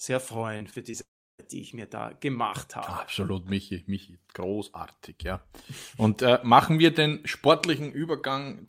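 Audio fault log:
0.57–0.95 s, repeated packet loss (robotic sound): The speech breaks up into a choppy stutter. Four short holes fall close together, the longest about 28 ms. Together they remove about 80 ms of audio. Each hole is patched by stretching the sound just before it, so about a fifth of this stretch is filler rather than real signal. The repeated patches give the robotic edge.
1.01–1.40 s, long network dropout: The speech cuts out for about 0.38 s. The last sound is briefly carried on as a fading tail. Most of the gap, about 0.33 s, is then plain silence. When audio returns, that missing piece never comes back. The sound simply resumes further on. A long stall in the incoming stream is the likely cause, with concealment giving up after a short tail.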